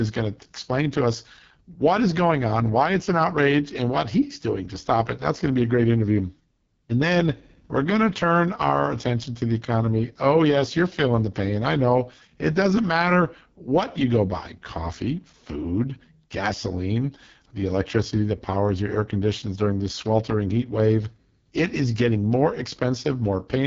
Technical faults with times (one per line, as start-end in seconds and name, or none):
0.00-23.66 AMR wideband (HD Voice) codec